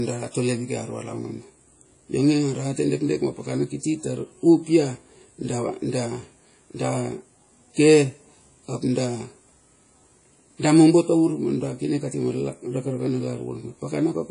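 Throughout the speech, nothing sounds above 10.1 kHz. A washy, ringing hiss breathes with the signal. This is likely WMA compression, around 32 kbps.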